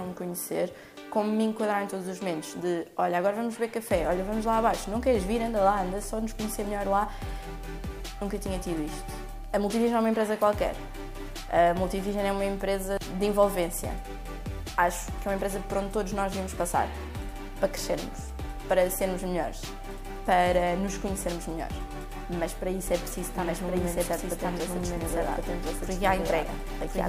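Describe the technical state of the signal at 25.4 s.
At 25.4 s the signal carries a doubled audio track. It begins abruptly at 22.87 s and runs to the end. The same sound is heard twice. A second, full-band copy trails the first by about a second, at roughly the same loudness. It has no decay and no room colour, so it reads as a clean repeat rather than an echo. The likely cause is a second capture through a slower path, or an edit that left two copies out of step.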